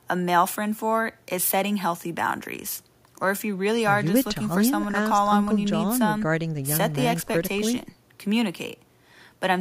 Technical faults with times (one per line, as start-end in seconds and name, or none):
none